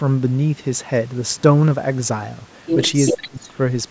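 From 3.06 to 3.28 s a delayed copy of the speech returns about 0.39 s after the original, at roughly the same loudness as the speech itself. This is an echo leak, likely from a far end playing the call on a loudspeaker, where its echo canceller let part of the microphone pickup through and sent it back. On a spectrogram the harmonic pattern of the earlier speech reappears, shifted right by about 394 ms. The waveform shows a second burst of matching shape where there should be none.

Overlapping it, from 3.15 to 3.54 s, the speech dips sharply, by about 25 dB at its deepest, over roughly 0.4 s. This is speech suppressed in double talk, likely caused by an echo canceller that couldn't tell the talker from the returning echo and turned both down. The waveform envelope collapses into a narrow, uneven trough. On the spectrogram the whole band fades toward the background, up to the 8 kHz ceiling left by the call's microphone processing.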